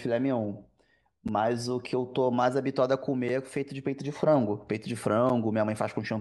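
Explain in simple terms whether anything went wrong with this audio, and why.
Three brief dropouts can be heard in the speech, at 1.28 s, 3.29 s and 5.29 s. Each is a gap between chunks. The audio was carried in pieces about 2 s long, and at every join roughly 7 ms of silence was inserted before the next piece started. Nothing is missing from the speech itself; it is just cut by a tiny hole. The evenly spaced timing is what points to this chunk-boundary cause.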